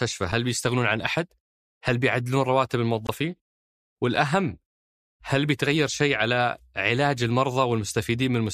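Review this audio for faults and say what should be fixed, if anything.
Blocks of digital silence occur at 0.32 s, 3.07 s and 4.16 s. The two at 0.32 s and 4.16 s are about 5 ms long and the one at 3.07 s is about 20 ms. In each, the speech cuts out and then resumes with no fade, so there is an abrupt step at each edge. The short gaps sound like ticks, and the longer one sounds more like a brief pop or dropout. This pattern points to the output buffer not being filled in time. To prevent it, give the audio processing thread enough headroom, using a larger buffer or lighter per-block work, so each block is ready before the output needs it.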